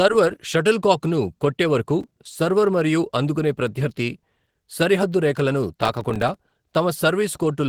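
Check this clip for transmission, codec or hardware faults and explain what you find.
Two faults are present in this speech clip: codec degradation throughout, and two bursts of crackle.

Opus voice compression runs the whole length. The speech sounds plainly coarse, slightly hoarse and processed. At 16 kbps in hybrid mode with 20 ms frames, SILK's linear-prediction coder handles the lower band and a thin CELT layer covers the rest up to fullband, so the excitation is coded roughly.

Processor overload crackle occurs from 2.01 to 2.25 s and again from 5.82 to 6.49 s. Each burst is a gritty tearing laid over the speech. The processor repeatedly missed deadlines for very short buffers, around 3 ms each, about fifteen in the first burst and twenty in the second. Each miss leaves a hard-edged gap of silence.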